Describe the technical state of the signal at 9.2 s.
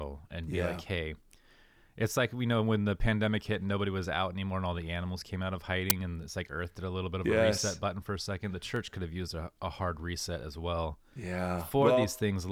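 At 9.2 s the speech sits inside a run of CD scratch ticks spanning 8.76 to 9.44 s. A surface blemish defeats the error correction once per disc revolution, and the player conceals the damaged samples, producing four brief ticks about six per second, each under a millisecond.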